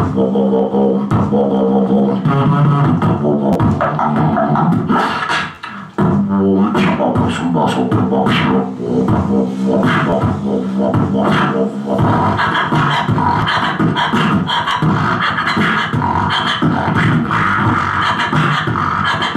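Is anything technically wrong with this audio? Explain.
Yes: repeated buffer faults at 3.53–3.55, 5.55–5.57, 10.10–10.12, 13.42 and 14.69–14.71 s. Fresh audio arrived late, so the device replayed its last 11.6 ms block, which fits a 512-sample buffer, twice, or once at 13.42 s. Each repeat produces a brief buzzy stutter with hard joins.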